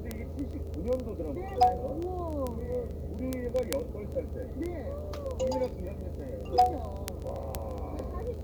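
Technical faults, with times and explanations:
0.11 to 8.43 s, word clock ticks: a steady run of ticks, roughly fifty a second, all the way through. The receiver isn't locked to the sender's clock and drifts by around a tenth of a percent, so about every 20 ms a sample gets dropped or doubled.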